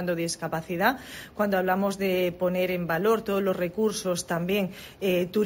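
Imaging from sample-and-hold upsampling runs throughout the clip. Each sample was simply repeated to lift the rate from 16 kHz to 48 kHz, leaving mirrored spectra. The first image, between 8 and 16 kHz at about 20 dB below the signal, adds a bright metallic fizz that tracks the sound's level.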